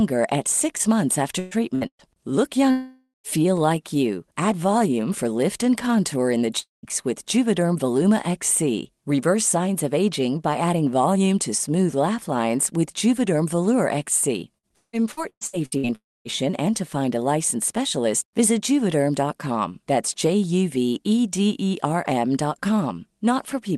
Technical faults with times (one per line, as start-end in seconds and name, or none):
1.39-2.02 burst of packet loss
2.71-3.27 long network dropout
6.60-6.86 long network dropout
14.58-16.35 repeated packet loss (robotic sound)
15.95-16.28 long network dropout